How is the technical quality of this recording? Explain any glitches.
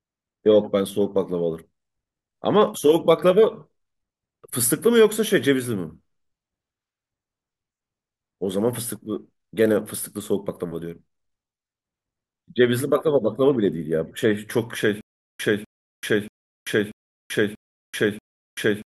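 The recording breaks down near its end. From 15.01 s to the end, a stutter with silent gaps: playback likely stalled and kept retrying, replaying the last 249 ms fragment six times, each followed by about 386 ms of dead silence, a steady 635 ms cycle, while the speech that belonged there is lost.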